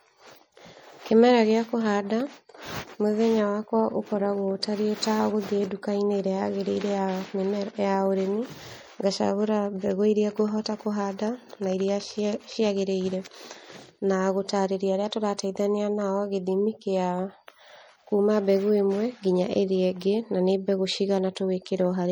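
Throughout the speech the sound is watery and swirly, with the treble cut off, s sounds turned into metallic chirps, and smeared consonant attacks. This is likely MP3 compression at a tight bit budget, which fits around 48 kbps. The encoder drops the high frequencies, and weak frequency lines flicker on and off between frames.

At 21.35 s a short hiss arrives about 14 ms ahead of a sharp onset, and the attack itself sounds softened. This is pre-echo. The codec spread its quantisation noise across the whole block, so noise sized for the loud attack leaked into the quiet moment just before it.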